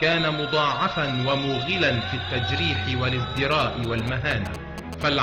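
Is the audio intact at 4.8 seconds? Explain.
No, at 4.8 seconds you're inside a stretch of GSM signalling bursts that runs from about 3.37 to 5.03 s. A nearby 2G phone is firing off short groups of radio bursts, and the audio circuitry rectifies them into the signal. You hear it as that galloping dit-dit-dit of brief buzzes at around 217 Hz, sitting roughly 10 dB below the wanted sound.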